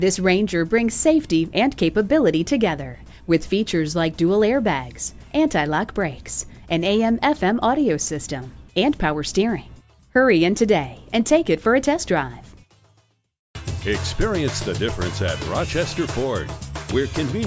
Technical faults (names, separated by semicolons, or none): none